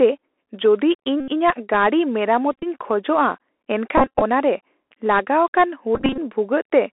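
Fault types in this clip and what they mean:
Bluetooth CVSD headset codec: Throughout this speech the sound passes through the narrowband headset codec, which tracks the waveform one bit at a time at 64 kHz, stepping up or down with an adapting step size. The band sits at roughly 300 Hz to 3.4 kHz, so a spectrogram shows an empty region above about 3.4 kHz. Sibilants turn scratchy where loud, fast sounds outrun the step. A granular hiss lies under the speech, visible as a grainy floor on the waveform.
Bluetooth headset packet repeated: At 1.20, 2.52, 3.98 and 5.95 s, lost packets were replaced by replaying the previous packet's data. Each stretch lasts roughly 0.1 to 0.24 s; the first is a single run of about 75 ms, while the others have losses scattered through them with runs of about 20 to 30 ms. Those runs repeat every 3.75 ms, producing a short buzz near 267 Hz. On a waveform this appears as a tiny identical segment repeating in a row, and on a spectrogram as evenly spaced harmonic stripes.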